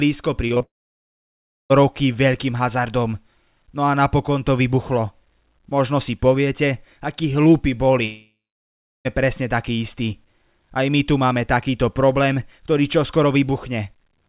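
Short concealed packet loss hits three times in quick succession: 0.48 to 0.52 s, 0.54 to 0.58 s and 0.58 to 0.62 s. Each gap of about 20 ms is patched by extending the preceding sound. The result is a brief smeared flutter.

At 0.62 s the sound stops until 1.72 s. A short fading continuation gives way to about 1.01 s of silence. This is likely a long network dropout. When the sound resumes, the missing stretch is simply gone. A second likely long network dropout runs from 8.06 to 9.07 s. After a short fading tail there are about 0.71 s of silence, and then the sound picks up further on.

Throughout, nothing is heard above 4 kHz, which points to a narrowband call codec such as G.711.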